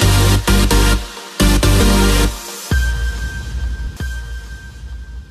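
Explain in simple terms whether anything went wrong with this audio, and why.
At 1.79 s the sound jumps ahead by roughly 70 ms. This is compressed frames skipped: a few chunks of the encoded audio, each about 23.2 ms, were never played. The gap fits about three frames.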